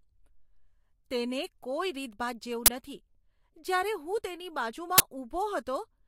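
At 2.66 to 2.68 s, just after "કોઈ રીતભાત", and again at 4.98 to 5.00 s, after "જ્યારે હું તેની", the speech is interrupted by an abrupt, loud burst of digital noise. Each is an uninitialised buffer fault: a block of output reached playback before any audio was written into it, so whatever stale memory it held was played as samples. Both bursts last 20 ms, which fits a 20 ms processing block.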